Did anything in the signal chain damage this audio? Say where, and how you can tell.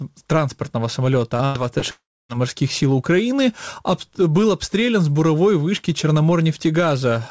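Yes, the damage happened at the network stage of a call path, where the G.722 codec itself leaves nothing above 8 kHz.

Short concealed packet loss appears at 1.37 to 1.42 s and again at 1.79 to 1.85 s. Each time about 30 ms of audio failed to reach the decoder in time. The receiver covered the hole by extending the preceding sound for roughly 22 ms and 34 ms respectively, then cross-faded back into real audio. The result is a brief smear or wobble rather than a clean gap.

A burst of packet loss follows at 1.45 to 1.58 s, barely 30 ms after the first short loss. Here about 90 ms went missing in a row, so the concealer had to stretch the last sound for around 94 ms while lowering its level. It becomes a held buzz or fading hiss, and when playback resumes the material that belonged in that stretch is simply gone.

A long network dropout, likely the cause of the stretch from 1.91 to 2.32 s, removes about 390 ms of audio. 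The concealment carries the last sound forward as a decaying buzz or hiss, but it cannot sustain that for long. It gives way to roughly 0.28 s of silence before the audio returns further along, with the lost portion absent.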